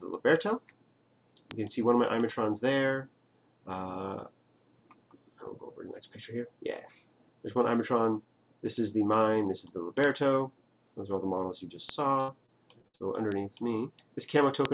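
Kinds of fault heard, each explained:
Bit error spike: at 1.51, 9.14, 10.04, 11.89, 13.32 and 14.65 s, one sharp broadband tick with no relation to the surrounding sound. A single flipped bit throws one sample, or three in a row, up or down by a power of two before it snaps back.
Repeated packet loss (robotic sound): from 12.2 to 13.02 s, six holes totalling about 240 ms, the longest 80 ms, are each covered by stretching the last received sound. Concealing nearly a third of this stretch makes it choppy, with pieces missing.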